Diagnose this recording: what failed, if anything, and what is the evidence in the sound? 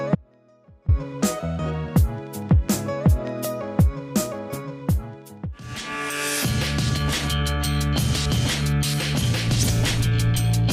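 Audio dropout to a faint residue, from 0.15 s to 0.88 s. The signal cuts out abruptly for about 0.73 s and then returns just as suddenly. It is not a pause or fade, and the gap is not silent: a faint trace of the sound remains, roughly 30 dB below its normal level. Because the path stayed live while the main signal vanished, the likely cause is an intermittent break in the analogue wiring, letting only leakage through until contact resumed.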